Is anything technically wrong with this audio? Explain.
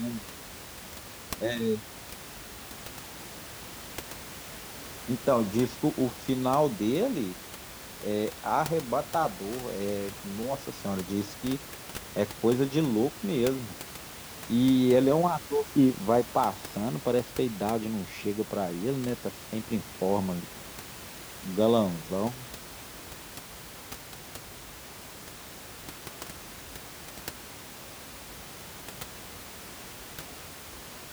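No, nothing is technically wrong.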